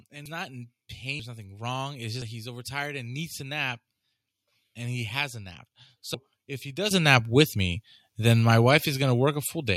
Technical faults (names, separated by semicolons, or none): dropped buffer (overrun); microphone volume stepped up